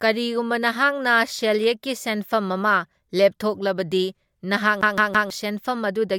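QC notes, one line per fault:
4.81 to 5.30 s, CD stuck on one turn: a fragment of speech about 0.16 s long plays three times in quick succession, with a brief mute at each jump back, as a scratch keeps throwing the laser back one track. The evenly spaced repeats of an identical slice and the clean little gaps between them set this apart from a stalled stream, which tends to freeze or buzz on a tiny repeated buffer rather than stutter rhythmically.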